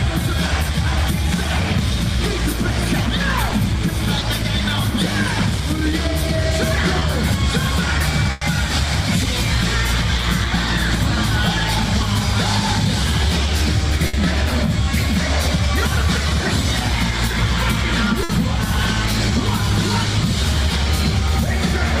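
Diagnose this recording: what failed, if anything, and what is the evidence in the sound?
The network stage failed, with short concealed packet loss at 3.49, 4.19 and 6.99 s. At each point about 20 ms of audio never arrived, and the decoder filled the hole by extending the preceding sound before crossfading back. Each one is heard as a quick smear or wobble. On a spectrogram each shows as a thin vertical strip where harmonics blur or turn to shaped noise. The waveform shows a short stretch of repeated cycles with a slight seam at each edge.

The network also produced bursts of packet loss at 8.31 to 8.43 s (about 100 ms missing), 14.07 to 14.15 s and 18.23 to 18.31 s (about 60 ms each). Here consecutive packets were lost, so concealment had to carry the last sound longer while fading it down. This is heard as a held buzz or dying hiss before the audio jumps ahead with that portion gone. 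A spectrogram shows frozen, decaying bands, and the waveform shows a shrinking periodic envelope.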